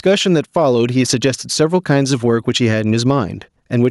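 Gain pumping runs through the whole clip, with the level swinging by around 10 dB. The likely cause is gain set far too high, with a fast limiter clamping each peak, leaving the speech squashed.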